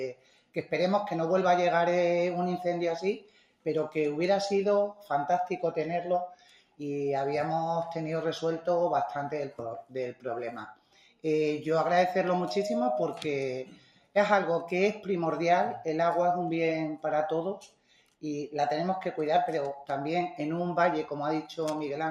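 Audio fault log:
throughout: noise suppressor applied to music or sounds. A speech-oriented suppressor stayed active, reading sustained tones, ambience and tails as noise. Its gain keeps shifting by about 5 dB, so held sound pumps and thins while sharp onsets pass largely intact.
0.13–0.72, 3.2–3.66, 6.35–6.8, 10.74–11.24, 13.66–14.15, 17.64–18.23 s: sound cut by the noise suppressor. Each time the suppressor judged the sound to be noise and clamped down hard, by up to about 12 dB over roughly half a second, so sustained or decaying material sinks and its tail is cut off early.
12.26–13.07 s: loudspeaker feedback squeal. A microphone caught its own loudspeaker, and the loop gain passed unity at 618 Hz. That tone builds over about half a second into a squeal at roughly the level of the surrounding sound.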